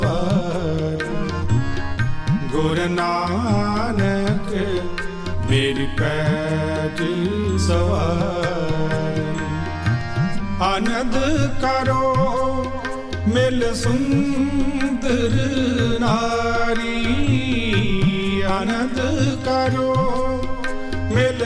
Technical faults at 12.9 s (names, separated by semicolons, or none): none